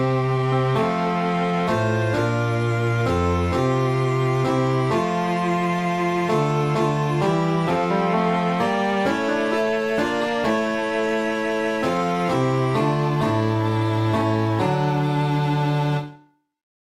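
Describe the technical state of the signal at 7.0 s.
At 7.0 s the signal is intact, with no dropout, distortion, glitch or other fault to be heard at that point.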